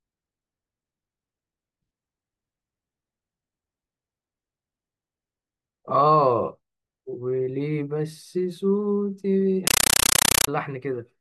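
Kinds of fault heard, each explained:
Compressed stream played as audio: from 9.67 to 10.48 s the speech gives way to very loud, chattering static, 8 ms noise bursts separated by silence and repeating 31.25 times a second. This points to an undecoded AC-3 (Dolby Digital) stream being played as ordinary samples.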